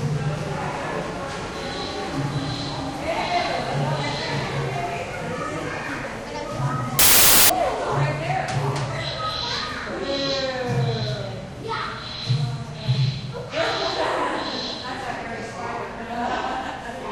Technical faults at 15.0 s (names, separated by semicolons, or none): none